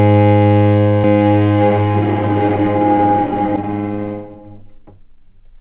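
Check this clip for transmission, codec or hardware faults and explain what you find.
One fault stands out: a doubled audio track between 1.04 s and 3.56 s, heard through a call path whose sound stops at 4 kHz, consistent with a narrowband telephone codec. A second, equally loud, full-band copy trails roughly 0.7 s behind, likely from a second, slower capture path or misaligned edit. Unlike echo or reverb, it has no decay or room colour and cuts in and out abruptly.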